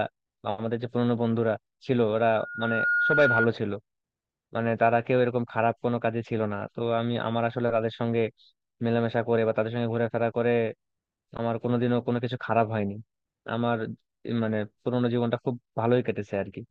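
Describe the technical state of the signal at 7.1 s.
At 7.1 s the signal is intact, with no audible dropout, distortion or other fault at that moment.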